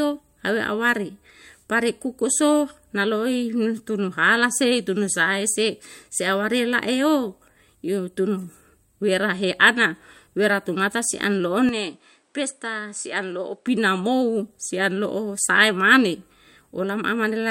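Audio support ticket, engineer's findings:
Input likely switched to a poorer device, 11.69–13.67 s. Capture path moves to a narrower-band input, then back. Speech loses everything above 10.4 kHz, turns duller, drops about 5 dB, gains a new noise floor roughly 45 dB down. No gap at either switch; tone changes abruptly.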